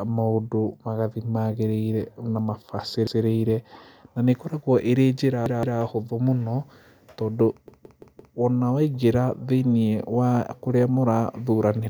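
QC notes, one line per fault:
3.07–3.24 s, 5.46–5.80 s and 7.68–8.36 s: repeated buffer. The device replayed the same 171 ms piece of speech one, two and then four extra times, with a hard join at each repeat. Unlike a dropout, no silence falls in and virtually nothing is lost. The result is a stutter, and its length fits an 8192-sample buffer.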